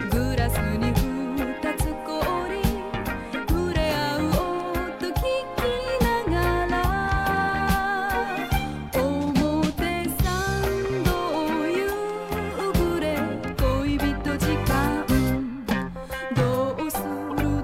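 At 3.34–3.36 s and 17.30–17.33 s, corrupt frame decoded: damaged frames played anyway, giving brief chirpy noise bursts of misplaced energy.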